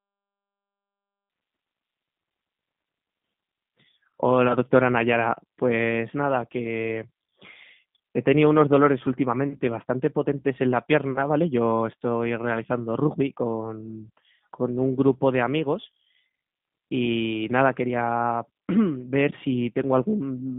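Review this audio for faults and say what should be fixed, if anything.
G.729 codec damage runs through the whole clip. Speech sounds rough and synthetic, squeezed into roughly 150 Hz to 3.6 kHz, with nothing above 3.7 kHz. This fits an 8 kbit/s G.729A stream rebuilding speech from a filter, pitch predictor and sparse pulses. To prevent it, record or transfer the speech over a wideband or lossless path instead of a narrowband telephony codec.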